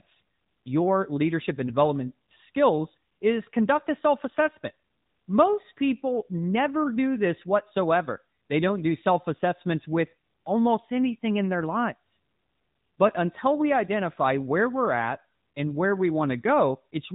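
Throughout the speech, an AMR narrowband mobile codec limits the sound: nothing passes above 3.8 kHz, and the frame-by-frame vocal-tract modelling leaves a plainly buzzy, synthetic edge consistent with a mid-rate mode near 10 kbps. A spectrogram shows a flat ceiling with empty space above.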